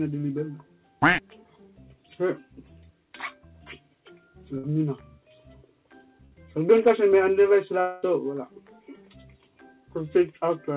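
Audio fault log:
3.48–3.52 s and 7.09–7.13 s: short concealed packet loss. About 20 ms was missing each time, filled by continuing the last sound. It heard as a brief smear, with a slightly smoothed patch in the waveform.
4.58–4.65 s and 6.25–6.33 s: burst of packet loss. About 60 ms was missing each time and was replaced by a fading held buzz or hiss. The spectrogram shows the continued sound fading before the audio resumes further on.
7.81–8.04 s: long network dropout, likely the cause of a roughly 220 ms stretch of continued, fading sound. The spectrogram shows smeared, decaying energy below 4 kHz, with no true silence, before the audio jumps ahead.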